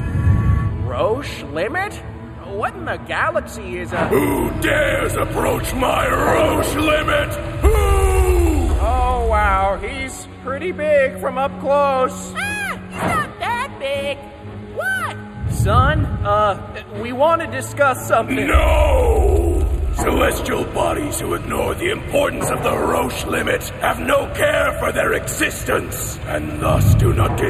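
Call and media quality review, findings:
Channel delay (comb filtering), throughout. Hollow, phasey; fixed notches from around 5 kHz upward, evenly spaced. One channel running roughly a tenth of a millisecond late, consistent with an offset of about four samples, then summed to mono.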